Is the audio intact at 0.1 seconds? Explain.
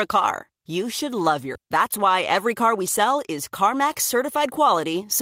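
Yes, at 0.1 seconds the audio plays through cleanly, with no dropout, click, distortion or other fault at that moment.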